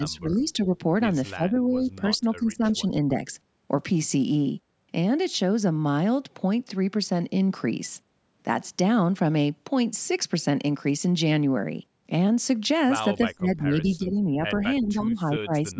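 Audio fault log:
0.00–0.75 s, 1.35–2.01 s, 2.17–3.31 s, 13.37–14.44 s and 14.79–15.79 s: speech suppressed in double talk. The speech ducks and breaks up in pieces, dropping about 10–15 dB and up to about 25 dB in the last stretch. This is likely the echo canceller turning everything down while both sides talked over each other.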